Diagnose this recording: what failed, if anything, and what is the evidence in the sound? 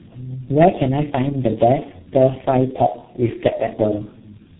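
Rough, muffled and warbly speech throughout, with nothing above 3.9 kHz. This is tandem speech coding, a codec-stage failure: the call appears to have been decoded and re-encoded across several low-rate speech codecs in a row, ending on something like G.723.1, each compounding the last one's damage.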